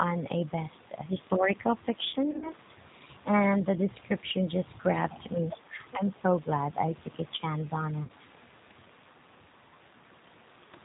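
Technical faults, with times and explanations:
Throughout, G.729 codec: the speech has been squeezed to about 8 kbit/s, which fits G.729A, rebuilding each 10 ms frame from a vocal tract filter, pitch predictor and a few pulses, so nothing above 4 kHz survives and the voice sounds plainly rough and synthetic.
2.31 to 2.53 s, VoIP packet loss concealed by the speech codec: around 90 ms of audio went missing in scattered gaps over 140 ms, the longest run 50 ms. The decoder stretched its last pitch and filter at falling gain, giving a fading buzzy tone or coloured noise.
8.03 to 8.12 s, VoIP packet loss concealed by the speech codec: 60 ms of audio lost within this span was bridged by extrapolating the previous frame, producing a brief smeared, weakening buzzy tone or coloured noise, and the voice stays thin for a moment after packets return because each frame builds on the last.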